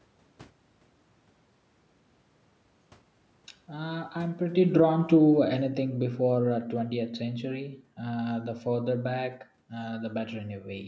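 Speech whose level sinks steadily from 4.22 s to 7.48 s, dropping by about 11 dB with the room noise falling alongside it. That shared fall marks automatic gain falling: the gain control judged the input too loud or its background noise too strong and pulled its gain down gradually.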